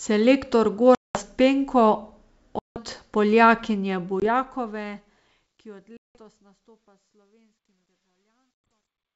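Packet loss on an ADPCM call leaves hard-edged silent holes at 0.95, 2.59, 4.2, 5.97 and 8.66 s, lasting 200, 170, 20, 180 and 100 ms. The decoder's predictor and step size lose track of the sender's, so sound returns slightly distorted. The waveform shows flat gaps, and the spectrogram shows blank vertical bands.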